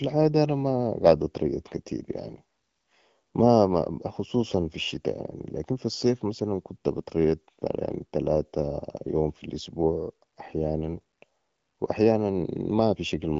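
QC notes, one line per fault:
No faults detected.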